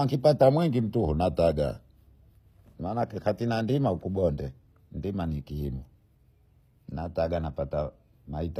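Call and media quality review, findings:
Throughout: treble plainly damaged, sounding synthetic and gritty. Nothing above 15.5 kHz. Likely HE-AAC compression, possibly v2 at around 24 kbps. Spectral band replication rebuilds the top from copied lower bands, so its harmonics don't align.

0.43–2.75 s: audio slowed 5.75% and about a semitone flat (−102 cents), restoring before "maana katinandima ukubonge". Likely a drift correction step, with a clock-matching resampler retuning its playback rate to rebalance its buffer.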